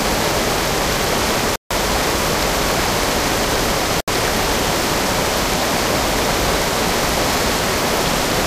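The sound drops abruptly to silence twice, from 1.56 to 1.72 s (a gap of about 0.15 s) and from 4.01 to 4.10 s (about 0.07 s), then resumes. This is likely a Bluetooth stall, where delayed packets let the headphones' buffer run empty.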